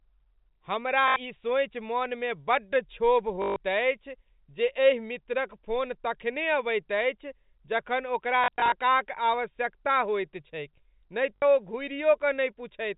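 Speech drops out four times, with packet loss and the last packet repeated. Gaps fall at 1.08 s (80 ms), 3.42 s (140 ms, before "अछि जे एहि मित्रक"), 8.44 to 8.72 s (scattered, after "अबैत अछि जखन ओकरा") and 11.36 s (60 ms). Stale audio replays until fresh data arrives. Runs buzz near 50 Hz, which fits 20 ms packets. Each sounds like a brief robotic stutter.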